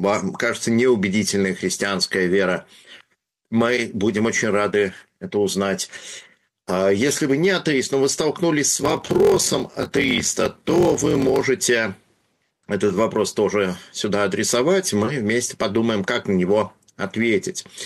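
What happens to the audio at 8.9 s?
From 8.74 to 11.41 s there is a block size mismatch (padded). Each block falls short of the block read, which fits a 1024-sample read, and zeros fill the rest. That gives a steady 43.1 Hz buzz and slows the sound to 0.861 speed. Unlike random dropouts, the gaps are evenly spaced and the timing stretches.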